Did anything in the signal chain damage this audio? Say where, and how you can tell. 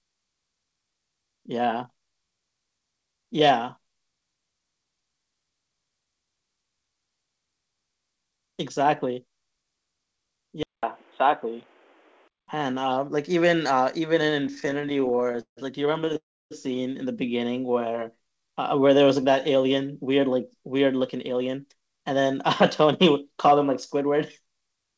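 Yes. Between 10.63 and 12.48 s, the input likely switched to a poorer device: a 200 ms silence, then a narrower band, about 5 dB level change, new noise about 40 dB down. The G.722 call path reaches 8 kHz, so this is a capture change, not codec.

Network and jitter buffer: repeated stalls (stutter) from 14.44 to 15.59 s, 25 concealed gaps up to 160 ms, about 35% of the span, plus four brief ones at 16.01 to 16.17 s. Nothing is lost, unlike dropouts.

Network: a call audio freeze from 16.17 to 16.53 s, likely late packets. One long fill, 341 ms, mostly 300 ms of silence, then the sound resumes intact. It is a single hold, not a stutter.

Jitter buffer slow-down from 17.67 to 19.23 s: playback at 88% speed, 200 ms added by repeating pitch periods. Pitch stays put, which rules out a clock or sample-rate error.

Jitter buffer speed-up from 21.16 to 22.35 s at 112%, then 22.81 to 24.85 s at 106%, each dropping roughly 150 ms of pitch periods. 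The audio sounds hurried at unchanged pitch.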